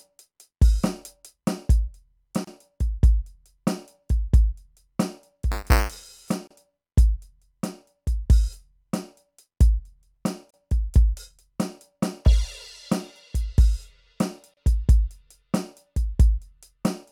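At 2.45 to 2.47 s the music drops out for about 28 ms: a gap at a join of encoded pieces. The clip was built from separately encoded pieces butted together without trimming, so the encoder's start-up silence and last-frame padding remain at the seam. The edges are smeared, and the music picks up exactly where it stopped.

From 5.51 to 6.31 s buffer tearing produces a steady robotic buzz at 200 Hz, which points to a buffer period of about 5 ms. The writing program and the reading hardware have drifted out of step and cross inside every period. A small slice of each buffer carries audio from roughly 10 ms earlier, one lap back, with hard joins on either side.

The same joining gap recurs every 4 s, each about 32 ms long, at 6.47 to 6.51 s, 10.51 to 10.54 s and 14.54 to 14.57 s.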